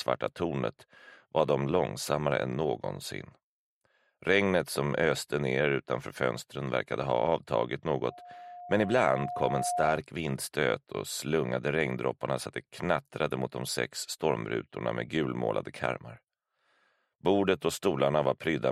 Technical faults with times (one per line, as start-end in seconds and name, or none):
8.08-10.02 loudspeaker feedback squeal